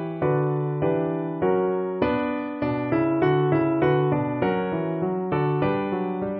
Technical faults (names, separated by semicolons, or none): none